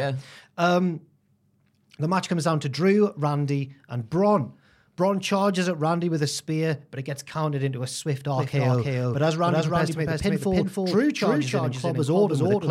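A second, out-of-step copy of the signal is likely being mixed back in, most plausibly from a slower capture path or an edit that left two overlapping copies of the speech. From 8.36 s to the end, this doubled audio track puts a full-band repeat about a third of a second behind the original, at roughly equal loudness. It cuts in abruptly, with no decay or room colour.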